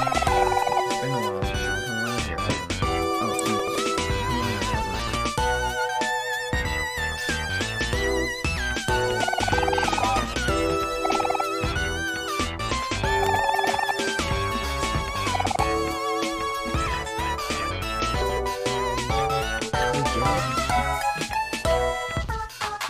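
At 3.39 s a sharp snap sits on top of the sound, an electrical switching spike. It is very brief and stands apart from the surrounding audio, the signature of a short arc from a nearby switch, motor or static discharge that was most likely picked up on the audio line. A second, equally brief snap of the same kind occurs at 13.26 s.

From 3.59 to 3.78 s the sound turns into a garbled flutter: frames out of order. Two neighbouring blocks of about 80 ms each were decoded in swapped sequence, consistent with runs of roughly four frames exchanged, so the stretch plays with its halves exchanged. No time goes missing. The same disturbance repeats at 4.99 to 5.17 s, 10.17 to 10.35 s and 18.21 to 18.39 s.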